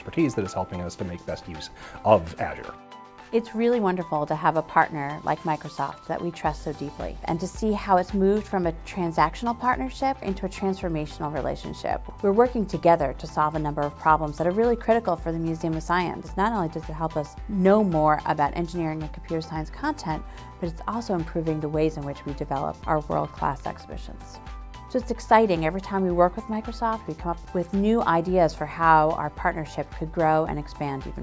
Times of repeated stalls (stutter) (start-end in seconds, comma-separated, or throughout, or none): none